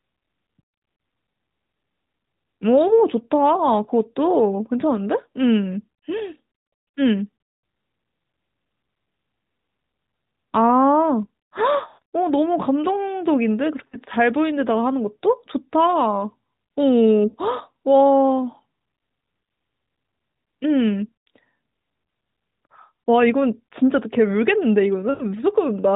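Speech carried over a narrowband AMR mobile link, with nothing above 4 kHz, and lost AMR speech frames at 0.96, 2.88, 11.88, 13.88, 17.28 and 25.10 s. The decoder conceals each gap by repeating the last good pitch and vocal tract settings at falling gain. The 20 to 60 ms losses are brief. The roughly 140 ms run at 11.88 s and the 100 ms run at 25.10 s smear and fade toward silence.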